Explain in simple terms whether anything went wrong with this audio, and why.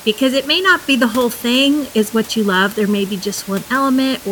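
Nothing went wrong with this speech recording. A faint background noise from the room can be heard well below the speech; it was picked up by the microphone and is not a problem with the system.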